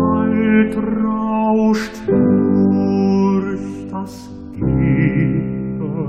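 No technical faults can be heard anywhere in the audio; the signal stays continuous and steady throughout.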